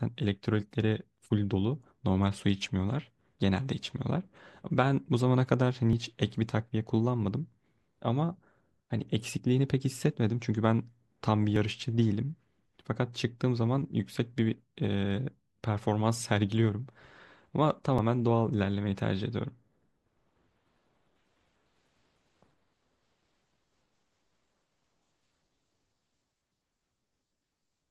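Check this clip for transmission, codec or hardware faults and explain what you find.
Three brief skips in the speech. Dropped buffer (overrun) at 5.93, 11.56 and 17.98 s: likely unread samples overwritten, joining the audio across a gap of roughly 20 ms, heard as a jump.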